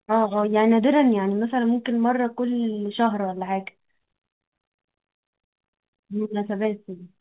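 Short stalls from a late packet occur at 4.05–4.11 s, 4.67–4.74 s and 5.16–5.25 s. Each time the jitter buffer ran dry, and the receiver stretched the last sound by about 27, 35 and then 60 ms before resuming. No audio is lost, but the sound briefly drags and holds, with the longest hold near 5.2 s.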